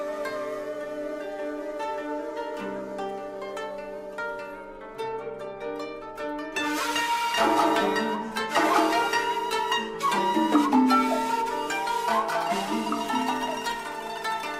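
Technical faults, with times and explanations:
No technical faults are detectable anywhere in the recording.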